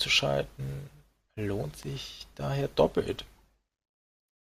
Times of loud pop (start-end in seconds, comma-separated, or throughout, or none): 1.83-1.85